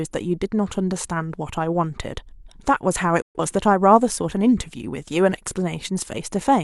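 A speech recording in which the sound drops out abruptly at 3.21 s, fading to silence over about 8 ms, and comes back at 3.40 s. Whatever was said in that gap is simply missing. This is a digital broadcast dropout: the receiver stopped getting usable frames, from signal loss or failed checksums, and muted its output until valid data resumed. The roughly 0.13 s of lost material fits a few consecutive bad frames.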